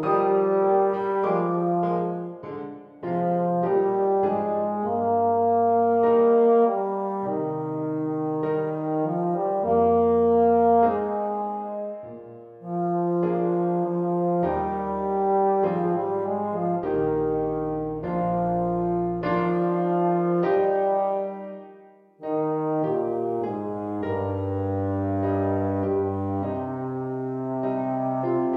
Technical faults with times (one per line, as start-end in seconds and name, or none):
none